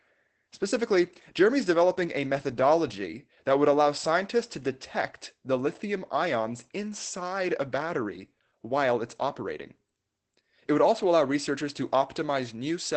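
Throughout the speech, Opus voice compression is plainly audible: nothing survives above 8.3 kHz, and the coarse SILK coding leaves a hoarse, faintly robotic grain, which fits a bitrate near 12 kbps. That grain separates it from a simple low-pass filter, which only dulls.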